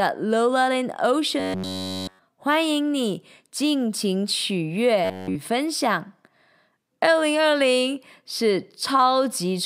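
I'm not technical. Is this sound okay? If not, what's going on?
No. From 1.40 to 2.19 s and from 5.04 to 5.36 s, the speech becomes a stiff metallic buzz near 94 Hz. This is robotic sound from repeated short buffers, likely a tiny slice of about 11 ms looping in place of fresh audio. Unlike a dropout, it never goes silent.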